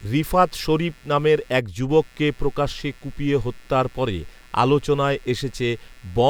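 Speech runs over a layer of computer activity noise from start to finish. It is a buzzy, chirping texture that pulses around 150 times a second. It sits roughly 30 dB below the speech, so it is clearest in the gaps between phrases. The noise follows the computer's workload, not the talking. Changing load on the processor, graphics card or mouse disturbs the ground shared with the audio circuit, and that ripple leaks into the recording.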